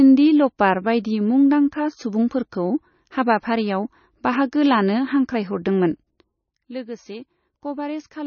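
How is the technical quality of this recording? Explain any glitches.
The recording carries heavy lossy-coding damage for its whole length, most likely from MP3 compression at a low bitrate, around 25 kbps. Short of bits, the encoder cut everything above about 6.6 kHz and dropped weak frequency lines frame by frame, so the speech sounds dull, watery and swirly, with smeared consonants.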